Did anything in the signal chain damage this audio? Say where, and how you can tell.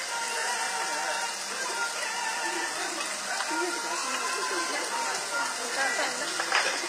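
Yes. The damage sits at the codec stage and runs through the whole clip: the treble sounds bright but gritty and metallic, with harmonics that don't line up with the lower spectrum, and nothing above about 15.5 kHz. That points to likely HE-AAC compression at a low bitrate, which fits about 24 kbps, where spectral band replication copies lower bands upward instead of coding the real top end. A simple low-pass or dull lossy codec would lose brightness rather than fake it.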